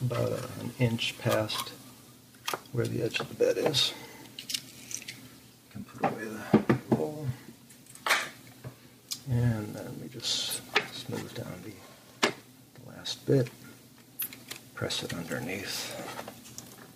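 No technical faults can be heard anywhere in the audio, and the signal stays continuous and stable throughout.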